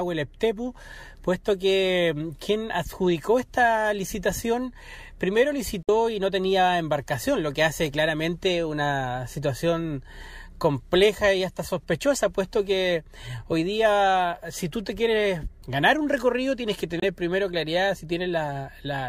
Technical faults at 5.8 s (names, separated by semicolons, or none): Bluetooth dropout